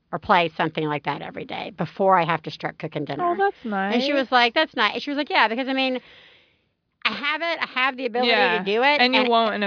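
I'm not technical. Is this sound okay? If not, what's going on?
Yes, nothing in this recording points to a technical problem with how the sound was captured, processed or delivered.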